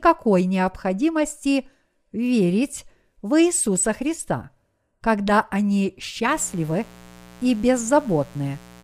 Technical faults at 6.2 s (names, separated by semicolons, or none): mains buzz